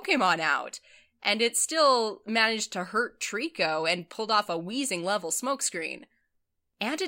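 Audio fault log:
0.16 to 7.04 s, clock slip clicks: A faint, regular ticking runs under the speech across this whole span. It comes at roughly ten ticks a second, around seventy in all. Each tick is one sample dropped or repeated. The likely cause is two devices running on separate, unmatched clocks, about 300 ppm apart. Each time that drift adds up to a whole sample, the stream jumps by one. That keeps the spacing steady, so the ticks come at a regular rate.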